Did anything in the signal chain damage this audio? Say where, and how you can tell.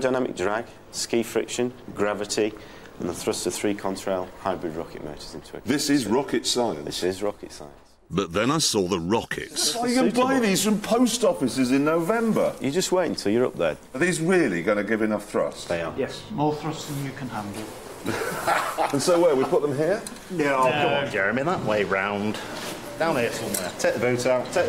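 No, nothing in the signal chain leaves an audible mark on this audio. None of the stages, from the wiring and converter through to storage and playback, shows any sign of damage.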